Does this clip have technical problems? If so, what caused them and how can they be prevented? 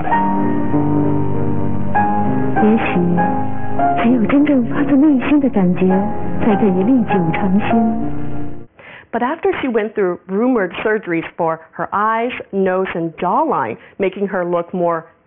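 Yes. Aliasing runs through the whole clip. The sound was downsampled without an anti-aliasing filter, apparently to about 6 kHz. Content above the 3 kHz fold point mirrors back down as gritty, metallic tones unrelated to the original, sitting roughly 20 dB below the main signal. A spectrogram would show energy packed hard against a 3 kHz ceiling, with mirrored streaks sloping the wrong way. Low-pass filtering below the new Nyquist frequency before resampling prevents this.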